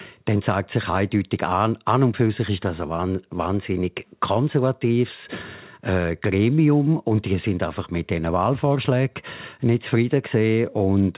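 Nothing goes wrong in this stretch of speech; it simply carries the narrow, phone-like sound of a call line that stops at about 4 kHz, which fits the G.711 mu-law codec used on ordinary telephone links.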